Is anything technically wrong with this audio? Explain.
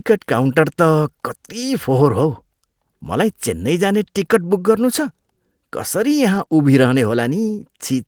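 Yes. From 6.33 to 6.51 s the speech turns rougher and noisier without any gap, with about 80 ms rebuilt in total. This is a lost packet rebuilt from error correction: several separate packets went missing, and the decoder played the low-bitrate copies carried inside the following packets.

Between 6.45 and 6.49 s there is a brief smear or wobble, and a short sound may drop out. This is short concealed packet loss: about 20 ms never arrived in time. The receiver extended the preceding sound for roughly 11 ms, then blended back into the real signal.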